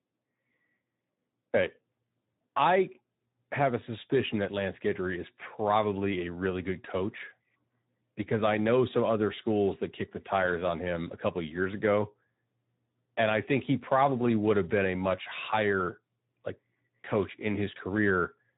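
Speech runs through the Speex codec for the full duration, and the coding damage is plainly audible from start to finish. Speex is a CELP coder that models the voice with a small set of predictor and excitation parameters. At this setting the excitation gets too few bits, so the speech comes out noisy and hoarse, which fits a bitrate around 11 kbps. The band stops at about 3.8 kHz, the narrowband telephone limit, leaving the audio dull and boxy.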